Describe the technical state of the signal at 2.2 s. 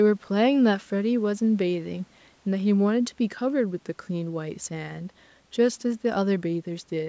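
At 2.2 s the speech is intact, with no fault present, and the call microphone processing is working as expected, its band-limiting leaving nothing above 8 kHz.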